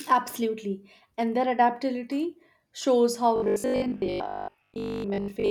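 From 3.36 s after "their adaptability shows how" to the end of the clip, the speech turns into robotic sound from repeated short buffers: a rigid, metallic buzz at 50 Hz that only loosely tracks the words. The likely cause is audio arriving too seldom, so the playback side loops the last fragment, about 20 ms long, to fill the gaps. For most of that stretch the loops replace real audio, and the fixed repeat rate imposes the buzz pitch.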